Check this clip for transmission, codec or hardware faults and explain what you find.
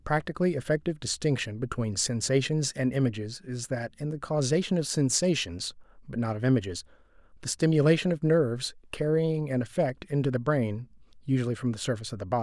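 Listening through the speech recording turns up no fault of any kind.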